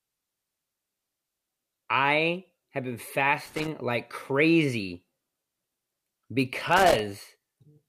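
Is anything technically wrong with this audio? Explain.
Yes. There is loose connector crackle in two places: from 3.46 to 3.68 s, between "I have been" and "like crazy", and again from 6.58 to 6.99 s. A worn or dirty contact keeps making and breaking, chopping the speech, and any DC on the line adds pops. It sounds like ragged bursts of scratching, irregular in spacing and level. That sets it apart from digital clicks or dropouts, which land as isolated ticks or clean gaps.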